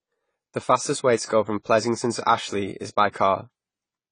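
Across the whole speech clip the sound is dull and fizzy, with nothing above 9.9 kHz on a spectrogram, which points to likely AAC compression at roughly 24 kbps. Pre-echo appears at 1.25–1.29 s, between "fastest way to" and "go from", and at 3.11–3.14 s, just after "is by". In each case a short hiss runs 42 ms and then 30 ms ahead of an attack, which shows as a smeared onset in the waveform.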